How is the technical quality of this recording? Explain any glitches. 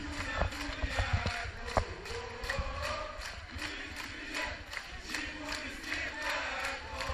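No glitches or technical faults can be heard anywhere in the recording.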